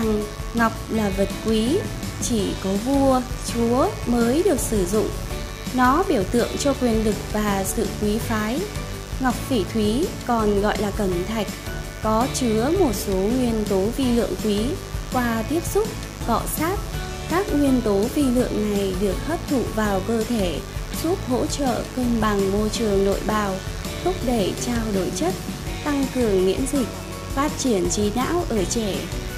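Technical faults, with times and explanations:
Throughout: mains buzz, a raspy buzz about 15 dB under the sound, from spikes twice per 50 Hz cycle; spectrogram shows stacked harmonic lines.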